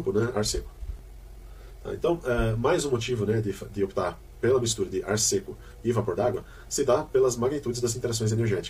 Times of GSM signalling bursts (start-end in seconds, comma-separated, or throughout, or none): none